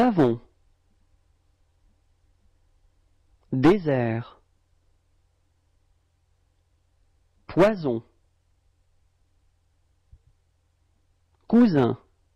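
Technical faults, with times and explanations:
0.00–0.31 s, hard clipping: overdriven by about 6 dB, the peaks are cut flat. The squared-off tops add high harmonics, heard as crackly fuzz on loud moments.
0.44 s, compressed frames skipped: about two frames, roughly 20 ms, fail to play, which fits 10 ms frames. The audio jumps ahead by that length.
3.64–3.94 s, hard clipping: overload of about 10 dB flattens the peaks heavily. The abrupt flat tops generate strong upper harmonics, giving a harsh, gritty distortion.
4.57 s, compressed frames skipped: roughly three frames, about 30 ms, are lost. The audio leaps forward.
7.57–7.69 s, hard clipping: about 9 dB too hot for the stage, so peaks are sheared flat. Harmonics spread upward as a brief burst of rasping fuzz.
8.23 s, compressed frames skipped: about two frames, some 20 ms, go missing. The audio skips ahead.
11.53–11.84 s, hard clipping: overdriven by about 5 dB, the waveform's tops are cut flat. 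The added high harmonics are heard as crackle on the loudest peaks.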